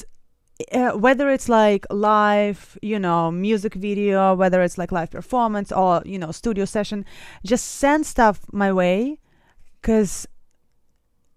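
No technical faults can be heard anywhere in this speech recording. There is nothing in it that calls for a timestamp or a repair note.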